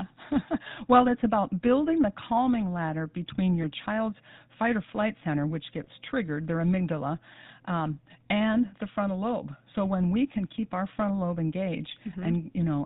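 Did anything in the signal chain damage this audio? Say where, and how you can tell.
Yes. At the codec stage, the whole clip carries the buzzy, gravelly texture of the GSM full-rate codec, and it is plainly audible. Nothing survives above 4 kHz. The roughness comes from the coder rebuilding the speech from a vocal-tract model driven by a sparse, regularly spaced pulse excitation, which fits the 13 kbps full-rate coder. A plain telephone band-limit would sound muffled but smooth. This grit points to the codec's modelling instead.

At the network or radio link, two brief lost GSM frames interrupt the speech. The first is from 3.62 to 3.65 s, between "the calming ladder between" and "child's fight or flight". The second is from 5.84 to 5.87 s, between "or flight center which" and "triggered their amygdala um". Each is a short metallic ring where the decoder repeated the last good frame's settings, which fits a single lost 20 ms frame. 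A packet dropout without this concealment would leave a click or a gap of silence, not a held, ringing tone.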